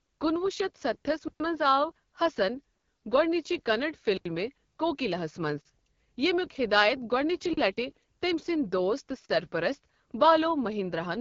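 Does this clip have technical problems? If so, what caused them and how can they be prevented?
Yes. The AMR wideband (HD Voice) codec runs through the whole clip at one of its lowest rates, 8.85 kbit/s, so the speech sounds rough and raspy. Nothing reaches above 7.4 kHz, and the top band is filled with shaped noise rather than real detail. Encoding at 12.65 kbit/s or higher would prevent this.

A block of digital silence occurs six times. The first runs from 1.28 to 1.40 s (120 ms), between "کُنہٕ وُہ شتھ ستستھس" and "منز آو حسن گوڈنِچہِ". The second runs from 2.75 to 2.84 s (about 94 ms), between "ستستھس منز آو حسن" and "گوڈنِچہِ کننڈ". The third runs from 4.17 to 4.25 s (80 ms). The remaining three each last 40 ms, at 5.61 s after "کوکِلا ہس", at 7.53 s and at 9.25 s. Each time the audio drops straight to silence and comes back with no fade. The longer gaps are heard as short holes and the brief ones as pops. 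This points to output buffers that were not refilled in time, and larger buffers or higher processing priority would prevent it.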